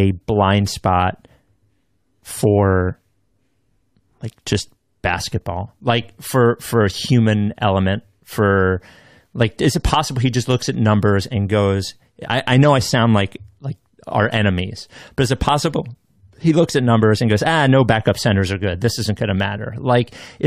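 No technical faults can be heard anywhere in this speech recording. Nothing interrupts or disturbs the sound at any point.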